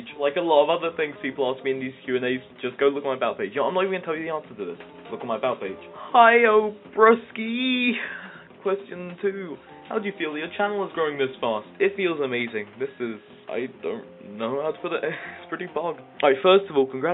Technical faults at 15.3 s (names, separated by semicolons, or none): none